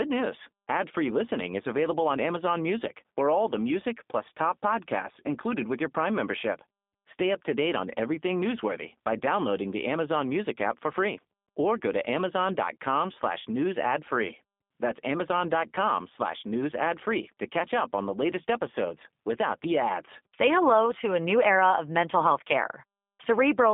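From start to finish the speech has gone through a G.729 codec, and the damage is plainly audible. Everything sits between about 200 Hz and 3.6 kHz, so it has that thin phone-line feel, and the voice is rebuilt from a vocal tract model plus a sparse pulse pattern rather than carried as a waveform. That's why it sounds rough and slightly synthetic, which fits the 8 kbit/s G.729A flavour.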